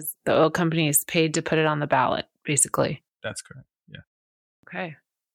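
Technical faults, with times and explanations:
4.56 to 4.63 s, clipped start after a pause: The speech resumes after a gap of about 0.55 s, and its first 73 ms are missing. The output device powered down during that silence. It needed time to wake and lock onto the signal again. Whatever arrived in that window was never played. So the word bursts out of silence, its opening sounds cut away. The onset feels abrupt and truncated, not natural.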